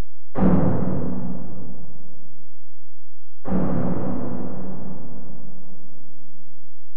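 From start to finish the waveform sits on a constant shift of about -13 dBFS, a DC offset that pushes the whole signal off zero. It adds no audible tone, but it eats headroom and leaves steady energy at 0 Hz beneath the sound.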